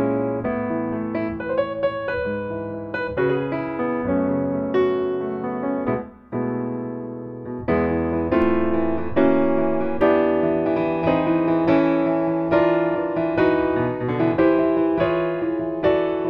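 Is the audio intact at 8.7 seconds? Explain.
No. A DC step runs from 8.42 s to 10.01 s, so 8.7 s falls inside it. At 8.42 s the waveform's zero line jumps by about -26 dBFS, the kind of shift a converter recalibrating or an offset input being switched in would cause. The offset lasts until 10.01 s. Each jump comes through as a low thump or click, while the sound itself carries on unchanged beneath the displaced baseline.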